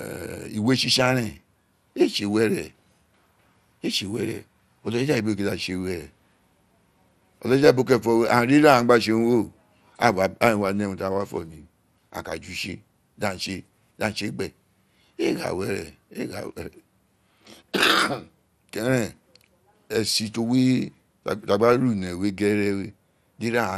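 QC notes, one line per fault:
Throughout, likely MP2 compression. Nothing is present above 14.9 kHz. The speech sounds dull, with a gurgling, granular roughness. Too few bits per sub-band switch the upper bands off and coarsely quantise the rest. This fits a rate near 80 kbps.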